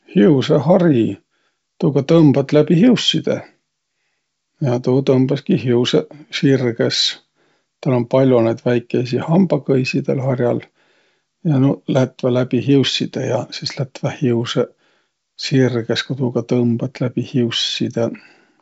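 No technical fault can be heard in this speech, which carries the character of G.722 wideband telephone coding, with the band reaching up to about 7.8 kHz and no energy above it, a picture that fits the codec's full 64 kbit/s mode.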